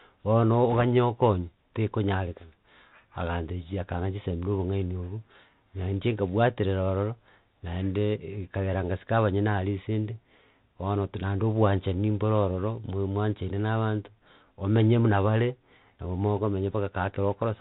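Throughout, the speech carries the Bluetooth CVSD headset codec. Each sample is coded as a single up-or-down bit, which fits a 64 kbps link. Nothing above 4 kHz survives. The adaptive step lags on sharp sounds, so s sounds turn scratchy over a grainy hiss.

From 0.72 to 0.84 s, bit errors on a Bluetooth voice link break in. Around one bit in a hundred flips. Each wrong bit's effect grows with the speech level and fades fast. So there are no loud clicks, just a brief rushing crackle.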